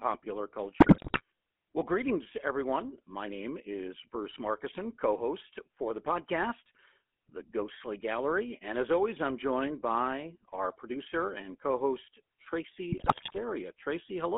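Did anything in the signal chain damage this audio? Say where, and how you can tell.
Yes. Throughout the speech there is a plainly audible buzzy, gravelly roughness, and the band is confined to roughly 250 Hz to 3.4 kHz. That points to the GSM full-rate codec at the call's codec stage, which fits a 13 kbps encoding. It models the vocal tract and excites it with evenly spaced pulses, discarding two of every three excitation samples.

From 0.8 to 1.22 s and again from 12.90 to 13.39 s, the speech breaks up into squawks, pops and gargling. These are GSM bit errors from the radio network. Corrupted bits in the filter, pitch or gain values reach the decoder, bending the spectrum or blowing up the level frame after frame while each bad patch lasts.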